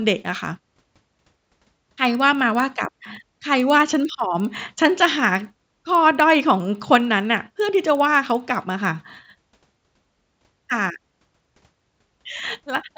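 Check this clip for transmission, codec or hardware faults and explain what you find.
One fault runs through the whole speech clip.

Resampler restarted on every block, throughout: each 50 ms block converted from 16 kHz to 48 kHz in isolation, leaving edge errors heard as 20 Hz ticking under the speech.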